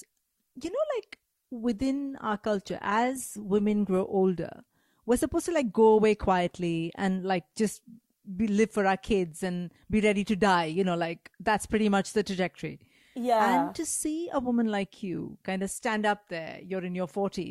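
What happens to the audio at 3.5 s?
At 3.5 s the speech is still in an adaptive stream starting at a low bitrate, which lasts from 0.0 to 4.0 s. The player began on a lean Opus encode, fitting roughly 24 kbit/s, before measuring the connection. Treble sounds dull and smeared, with stronger codec artefacts. A spectrogram shows a thin, blotchy upper band until 4.0 s, where quality steps up abruptly just before "older we're supposed to", extending toward 20.2 kHz with no waveform gap.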